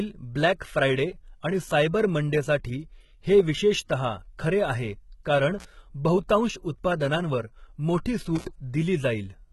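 Speech, with heavy codec damage throughout: the treble stops completely above 11.8 kHz, and what remains at the top sounds synthetic, with s sounds coming out gritty, metallic or lispy. That points to HE-AAC compression at a bitrate around 16 kbps as the likely cause. HE-AAC codes only the lower spectrum and rebuilds the upper range by spectral band replication, copying lower bands upward under a coarse envelope, so the upper harmonics do not line up with the real ones across the crossover. There are also two intermittent contact dropouts, from 5.58 to 5.65 s with the line open for about 49 ms, and from 8.35 to 8.45 s with it open for about 65 ms. In each, the signal breaks up with crackle at the edges and leaves only hiss while open, which is what a loose cable or plug does when the connection momentarily lets go.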